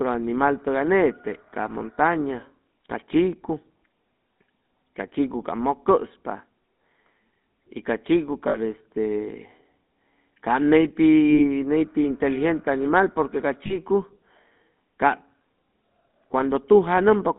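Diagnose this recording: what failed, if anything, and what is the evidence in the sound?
The codec stage degraded the speech throughout. It has the buzzy, gravelly roughness of the GSM full-rate codec, which fits a 13 kbps speech coder, and the band runs only from 200 Hz to 3.7 kHz. A spectrogram would show a hard ceiling at 3.7 kHz, and pulse-driven excitation would smear the harmonics.

Lost GSM frames on the network side cause three brief metallic rings, at 8.48 s (60 ms), 11.3 s (40 ms), and 13.66 s (40 ms, just after "animal porque ca"). The decoder repeats the last good frame at falling level, so the waveform would show a short, decaying, repetitive stretch, and the spectrogram would show smeared, static bands.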